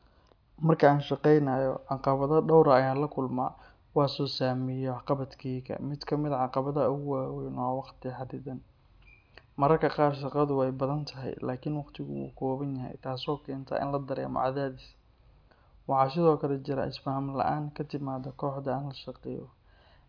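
No technical faults turn up anywhere in the recording. The speech plays through with nothing a careful listener would flag.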